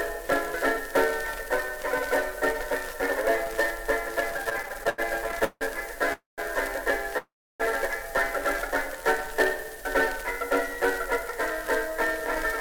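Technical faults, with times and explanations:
4.37–5.63 s, repeated stalls (stutter): packets kept arriving late, the jitter buffer emptied 20 times, and about 0.42 s of held sound makes the audio drag and stutter.
6.13–6.40 s, call audio freeze: packets were likely held up in transit, so the last sound is continued and fades to 150 ms of silence before the audio resumes.
7.18–7.62 s, call audio freeze: a longer hold-up, likely in the network, again empties the buffer, inserting a 418 ms gap that ends in 310 ms of silence.
8.88–9.82 s, jitter buffer slow-down: the buffer rebuilt its reserve by repeating pitch periods, adding 57 ms, so the audio plays at 95% speed with unchanged pitch.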